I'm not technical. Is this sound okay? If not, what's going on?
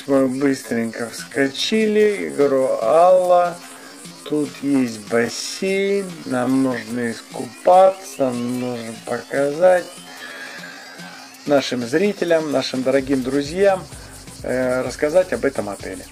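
No. There's a time-stretched section from the very start to 11.28 seconds. The sound plays at about 57% of its normal speed, yet its pitch doesn't drop, so it drags, then snaps back to normal pace. The likely cause is software slowing that stretch to fill a set length, holding the pitch steady by repeating tiny slices of the sound.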